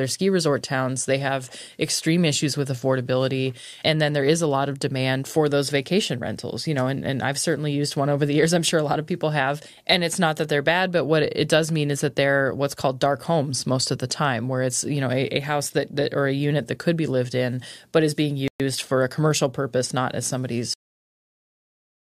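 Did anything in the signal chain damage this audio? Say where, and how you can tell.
Yes. A playback stall hits at 18.48 s, just after "in but is being". The speech drops out for 120 ms, until 18.60 s, then resumes with "for a commercial purpose". This is the playback stage. The player likely ran short of data or its thread was blocked.

The clip also has a cut-off end, from the final write or playback stage. After "commercial purpose not as", the sound stops dead at 20.74 s. It falls straight to digital silence with no natural decay. The last buffers were never written or played out.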